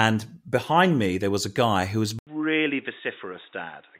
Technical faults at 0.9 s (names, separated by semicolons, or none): none